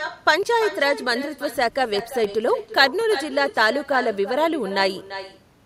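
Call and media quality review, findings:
Echo with no canceller, whole clip: every phrase shadowed by a thinner copy about 12 dB down, trailing by roughly a third of a second. Far-end loudspeaker pickup returned with no echo cancellation. Spectrogram: each speech burst repeated faintly about 300 ms later, duller. Waveform: low-amplitude tail after each syllable group.

CD scratch ticks, 1.99 to 3.01 s: five short ticks, about five per second, each a couple of milliseconds at most. Disc blemish beyond error-correction capacity, once per revolution, so the player interpolated or muted samples. Spectrogram: thin full-band vertical lines, evenly spaced. Waveform: brief spikes or flat gaps.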